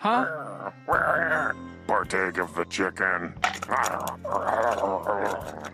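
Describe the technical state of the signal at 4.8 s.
At 4.78 s there is a repeated-frames fault. A single block of about 2.9 ms of compressed audio is decoded twice, which fits one duplicated frame. The repeat lengthens the audio by 2.9 ms and sounds like a tiny stutter.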